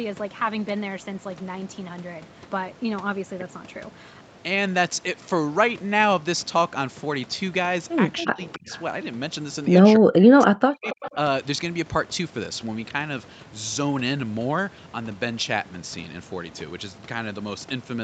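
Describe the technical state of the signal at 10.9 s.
At 10.9 s the echo canceller was likely confronted with double talk and turned down the local talker along with the loudspeaker echo. This is speech suppressed in double talk, running from 9.97 to 11.16 s. The voice dips very deeply and drops out in pieces for roughly a second in total.

Overlapping that, from 10.85 to 11.14 s, an echo leak appears, likely because the far side's canceller let part of its loudspeaker pickup through. A faint copy of the voice returns 279 ms late, well below the main speech.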